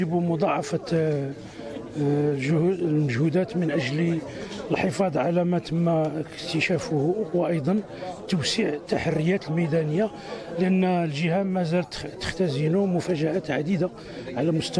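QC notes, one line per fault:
No faults heard.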